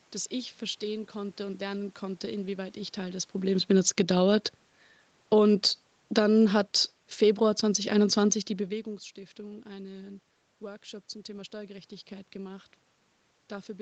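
From 3.35 to 4.16 s there is automatic gain falling. Shortly after the talker moves, around 3 s, the gain control eases down by about 6 dB. Speech and room noise sink together. Automatic gain rising follows from 4.08 to 4.59 s. The control pushes the level back up by about 4 dB, and voice and background swell as one. From 5.17 to 6.39 s the gain falls again. This is a slower dip of about 3 dB, pulling everything down.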